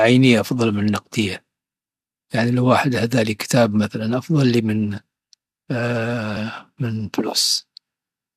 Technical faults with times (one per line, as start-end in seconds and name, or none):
6.36 compressed frames skipped